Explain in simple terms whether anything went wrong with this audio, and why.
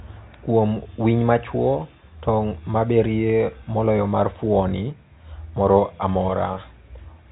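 At 6.54 seconds a brief buzzy hold replaces a 20 ms piece of speech: packet loss with pitch repetition, where the receiver repeated the last pitch cycle to fill the gap.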